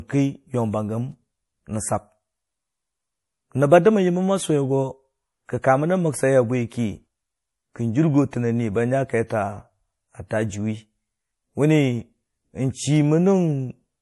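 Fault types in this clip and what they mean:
MP3 compression, throughout: the speech has nothing above 11.5 kHz and a plainly audible watery, swirling texture, likely from an MP3 encoder starved of bits, which fits a bitrate near 48 kbps, cutting the treble and dropping weak frequency lines frame by frame.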